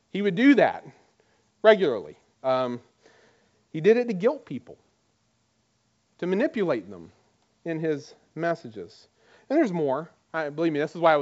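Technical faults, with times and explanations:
No technical faults, so there are no times or explanations to give.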